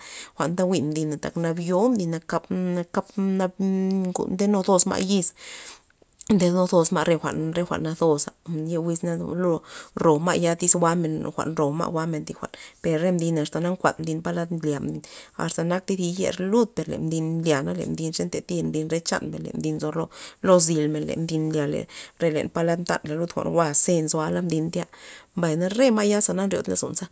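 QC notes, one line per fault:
No audible faults found.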